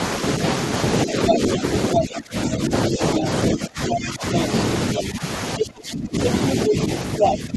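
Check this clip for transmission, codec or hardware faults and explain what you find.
Two echo-canceller faults appear in this speech clip, both tied to the other side talking at the same time.

Speech suppressed in double talk occurs at 1.05–1.63, 1.95–4.35, 4.97–5.22, 5.58–6.2 and 6.67 s to the end. The canceller likely ducked overlapping speech, cutting it by up to about 20 dB. This shows as waveform dips and thinned, gapped spectrogram energy.

The other side's voice leaking through appears briefly at 5.59–5.65, 6.68–6.73 and 7.19–7.35 s. These are likely residual loudspeaker echo, about as loud as the talker or up to about 5 dB louder, showing as stray spectrogram fragments.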